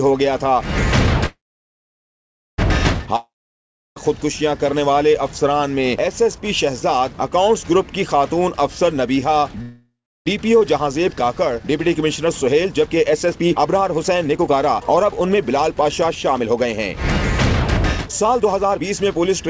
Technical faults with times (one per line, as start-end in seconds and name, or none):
1.26-2.60 call audio freeze
3.16-3.98 long network dropout
9.62-10.28 call audio freeze
10.54-16.98 jitter buffer speed-up
18.05-19.48 jitter buffer speed-up